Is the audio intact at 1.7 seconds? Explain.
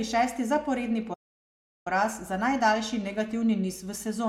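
No, the speech cuts to silence after "šesti zaporedni" from 1.13 to 1.87 s, resuming at "poraz za najdaljši negativni"; this is likely a playback stall, the player starved of data for about 0.72 s.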